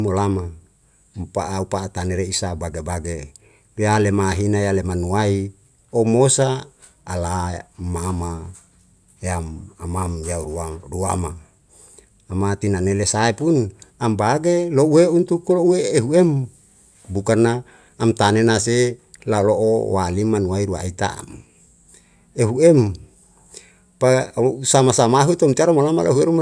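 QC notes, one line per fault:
No faults were found on review of this speech clip.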